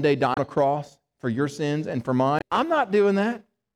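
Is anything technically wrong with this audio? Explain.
Yes. Damaged data in a compressed stream appears twice, from 0.33 to 0.38 s and from 2.38 to 2.42 s. In each spot the encoded bytes were corrupted, so the decoder misread the affected frames, lost sync and had to hunt for the next valid frame header before the speech could resume. Each event is heard as a brief chirp, squawk, click or short hole of about 50 ms that cuts across the speech.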